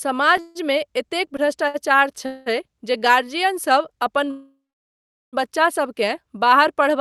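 Speech, carried over an Opus call path whose top end stops around 12 kHz, is interrupted three times by a call audio freeze: at 0.40 to 0.57 s and 2.26 to 2.48 s the last sound is drawn out into a fading buzz for roughly 0.15 s and 0.2 s, and at 4.31 to 5.35 s the buzz dies away into about 0.75 s of silence before the speech picks up again. Each time the speech resumes exactly where it stopped, so nothing is lost, but the pauses push everything after them later. The likely cause is packets held up in transit, leaving the jitter buffer empty until they arrive. A separate short stall from a late packet sits at 1.68 to 1.76 s, where one sound is held about 59 ms too long with a faint buzzy dip. A single packet missed its slot, and the receiver stretched the previous audio until it came, then carried on with nothing dropped.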